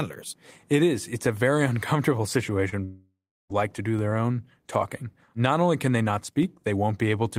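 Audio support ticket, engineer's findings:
Short concealed packet loss, 2.69–2.74 s. Brief smear where about 20 ms of audio arrived too late for the decoder. Receiver-side concealment extended the preceding sound for about 28 ms, then crossfaded back into real audio.

Long network dropout, 2.84–3.51 s, just before "like to do their". Likely cause is a network outage upstream of the decoder. Concealment buzz or hiss fades out, then about 350 ms of silence. About 660 ms of audio was lost and never played.

DC step, 3.99 s, between "like to do" and "their own talking", and again at 6.43 s, after "only can they not". Low thump or click at each point as the waveform baseline jumps. The offset then bleeds away, consistent with a 20 Hz high-pass downstream. Probable converter or input offset switching.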